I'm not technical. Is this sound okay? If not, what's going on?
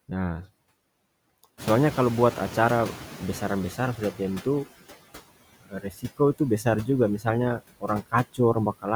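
No. Throughout, noise suppressor artifacts appear: the background sinks in pauses and swells under the speech. From 1.57 to 4.66 s, the noise suppressor is catching up. The room noise jumps around 1.5 s, and it takes about 3 seconds before the suppressor quiets it. Between 5.61 and 6.2 s, speech is cut by the noise suppressor. Parts of the speech, about a third of a second in total, are mistaken for background and turned down, so they sound swallowed.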